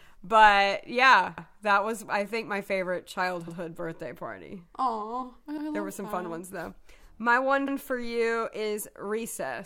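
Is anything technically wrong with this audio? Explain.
Yes, there's a case of overlapping chunks in this speech clip. At 1.38, 3.48, 5.58 and 7.68 s, each about 0.1 s long, a short stretch plays twice: right before "that was I think", between "I think my favorite" and "birthday party", and just ahead of "for you is". The audio was cut into 2-second chunks that each restart 100 ms before the previous one finished, so every join repeats that slice, giving a regular little stutter or click every two seconds.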